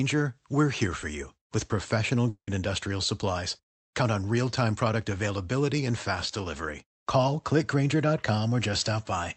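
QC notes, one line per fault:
2.29–2.50 s, long network dropout: the sound smears into a fading buzzy tail for about 180 ms, then drops to roughly 90 ms of near silence before resuming with a chunk gone, likely from packets lost on the Opus call path.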